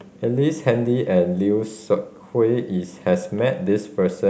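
A short speech recording with nothing technically wrong with it.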